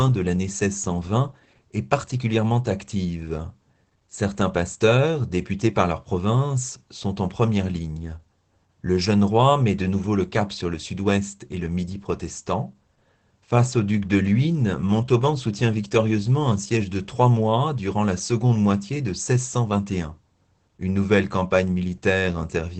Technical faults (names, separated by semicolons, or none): Opus voice compression